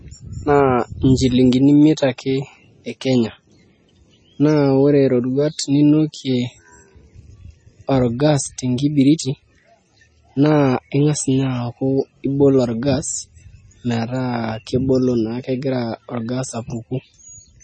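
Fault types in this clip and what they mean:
MP3 compression: The speech has nothing above 8.4 kHz for its whole length, and the remaining band sounds watery and swirly, with weak detail flickering in and out and sibilants turning metallic and chirpy. That is the pattern of a perceptual encoder that ran short of bits, chopped the treble at a fixed point and zeroed quiet frequency lines frame by frame. The damage is heavy, likely from MP3 encoding at a low bitrate around 24 kbps.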